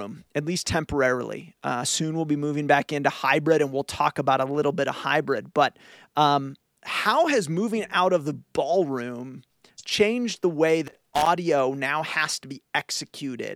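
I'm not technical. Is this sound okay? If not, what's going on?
No. From 10.87 to 11.26 s, right after "ballroom changed the way" and before "now has to", there is loose connector crackle: a brief, irregular scratching burst, like a worn or dirty plug briefly losing contact as it moved, chopping the sound into crackles.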